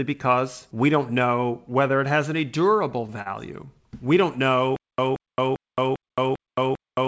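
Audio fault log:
2.90–3.28 s, repeated stalls (stutter): Just after "whether it has any", the speech drags and catches four times. Packets reached the receiver late, so the jitter buffer kept running dry. Each time, the receiver stretched the last sound to cover the wait. About 76 ms was filled this way, with the longest gap 40 ms. That is roughly a fifth of this stretch. Nothing is missing. The speech is simply held back in small jerks.
4.76 s to end, stutter with silent gaps: The same 178 ms burst of sound repeats on a steady 398 ms cycle until the clip ends. Between repeats there are about 219 ms of dead digital silence. The likely cause is a stream that stalled and retried, replaying its last fragment on each attempt before running empty. The speech that should have filled this span never plays. The G.722 call path is still audible here, with nothing above 8 kHz.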